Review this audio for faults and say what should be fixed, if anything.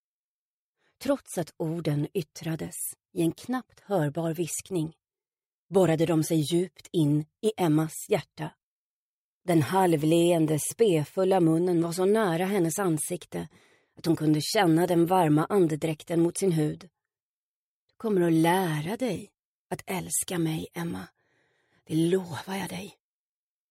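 Nothing needs fixing: the signal holds steady throughout, with no audible faults in level, timing or continuity.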